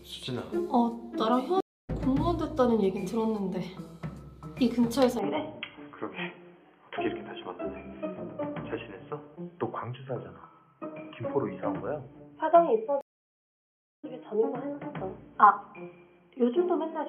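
At 1.60 s the audio cuts out for 284 ms, then picks up again at a point roughly a fifth of a second further on. This is a stream reconnect: the connection dropped, the player sat silent, then rejoined the live stream with a fresh decoder, so the material that passed during the gap is simply gone. The restart at 1.90 s fades in, and the audio jumps forward in time.

From 5.19 s to the end the sound narrows sharply, with nothing above 3.3 kHz, so it turns dull and boxy. There is no gap at the change and no obvious shift in loudness. A new noise floor about 40 dB below the signal comes in with it. The likely cause is an input switched to a poorer device, one whose limited bandwidth and own background noise replace the earlier pickup.

A second stream reconnect begins at 13.01 s, and this one lasts 1024 ms of silence. When the audio returns at 14.05 s it has moved on by about a second, consistent with rejoining a live feed after a longer dropout. 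The restart is heard within the narrowed, band-limited sound of the later section.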